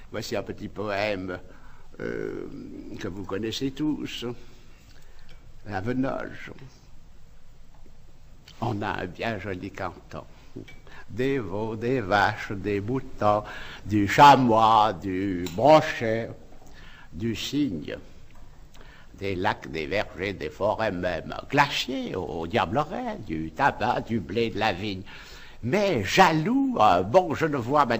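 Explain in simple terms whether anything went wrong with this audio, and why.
Nothing went wrong with this audio, because no problems can be heard anywhere in it.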